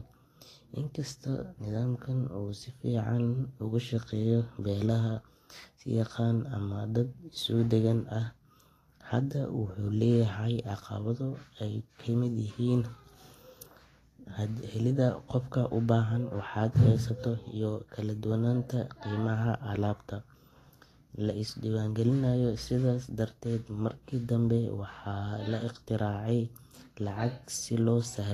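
Speech runs for the whole clip with plainly audible Vorbis compression damage, most likely from encoding at a low rate, with a sound that fits roughly 35 kbps. Nothing is present above 14.1 kHz, and the remaining treble is coarsely quantised, so sibilants and fine detail turn into a grainy, hissy wash and attacks smear. Unlike steady background hiss, this graininess rises and falls with the speech itself and vanishes in the gaps.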